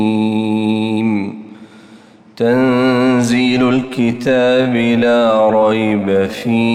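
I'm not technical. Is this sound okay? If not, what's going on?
No. From 3.75 s to the end, there is a time-stretched section. The sound suddenly slows to 0.63 times its normal pace, but the pitch stays the same. It drags. Software likely stretched it to fill a set length.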